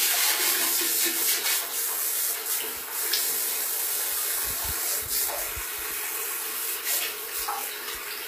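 Throughout, the treble sounds gritty and metallic, likely from HE-AAC compression at a low bitrate. The spectrogram shows copied, mismatched upper bands and a hard ceiling near 15.5 kHz.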